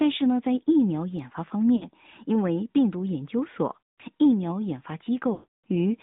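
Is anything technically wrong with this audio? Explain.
Yes. The AMR narrowband mobile codec runs throughout: speech is confined to 150 Hz to 3.7 kHz and sounds buzzy and synthetic, consistent with a 10.2 kbps mode.

Lost AMR speech frames occur at 1.76 to 1.90 s, 3.81 to 4.01 s and 5.34 to 5.64 s. The decoder repeats its last good pitch and vocal-tract settings with falling gain, so the voice smears and, in the longer two, fades out before returning rough.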